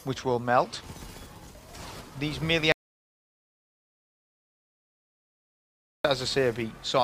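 At 2.72 s the sound cuts off abruptly and gives way to dead silence, with no room tone or hiss underneath, until it returns mid-flow at 6.05 s. This is an audio dropout to silence lasting about 3.3 s. The likely cause is that the input signal was lost, through a disconnected source, a broken link or an accidental mute, while recording carried on writing silence, so whatever occurred in that stretch is simply gone.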